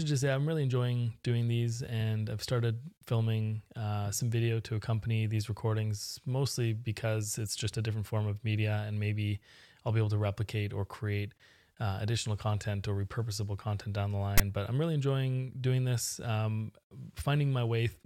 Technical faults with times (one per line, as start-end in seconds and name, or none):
14.38-14.40 file tags played as audio